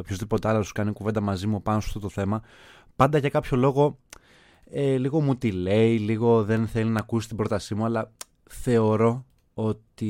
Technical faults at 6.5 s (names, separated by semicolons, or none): CD scratch ticks